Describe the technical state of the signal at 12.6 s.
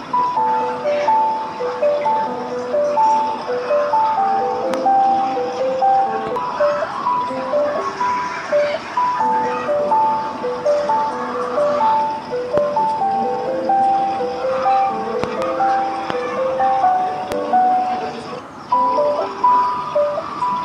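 A single loud pop sits at 12.58 to 12.60 s, lasting about 20 ms. It rises well above the surrounding level, roughly 15 dB louder than the sound around it. The likely cause is a brief voltage jolt, such as from a plug, switch, static discharge or driver glitch, entering the chain. The following stages shape that jolt into one sharp click. The sound underneath carries on through it without a break.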